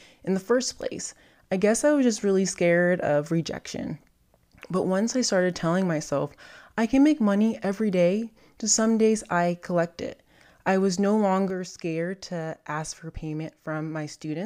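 A speech recording with a sudden gain jump at 11.50 s, right after "it I was no". From that point to the end of the clip the level falls abruptly by about 6 dB, and the speech and the background noise drop together in a single step instead of fading. That points to the digital gain changing from one sample to the next, most likely a gain setting or bit shift applied with no ramp to smooth the transition.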